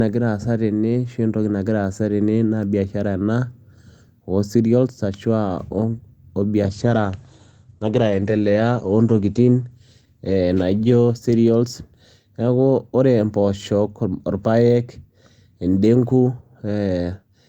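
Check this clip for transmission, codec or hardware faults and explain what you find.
There's one fault, a call bitrate drop from 6.66 to 12.79 s. The call's bandwidth estimate fell, so the encoder coded far more coarsely, which fits a fall to roughly 14 kbps, and cut the top from 20 kHz to 8 kHz. The speech turns muffled and rough, worst for about 3.1 s.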